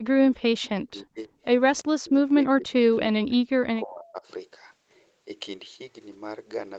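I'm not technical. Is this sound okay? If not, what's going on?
No. Two faults show up, both in the first four seconds or so.

Speech suppressed in double talk: this is likely because both people spoke at once, and the call's echo canceller, which tries to remove the other side's voice coming back through the microphone, couldn't tell the two apart and turned everything down. You hear the voice sink far down or cut out in pieces from 0.0 to 0.61 s, 0.83 to 1.29 s, 1.81 to 2.72 s and 3.02 to 4.27 s.

Echo leak: on the other end, the call was likely played through a loudspeaker, and the echo canceller didn't catch all of it, so a bit slipped back into the call. Between 1.77 and 1.81 s there is a very faint, brief copy of the voice, arriving about a third of a second late, just before the next dropout begins.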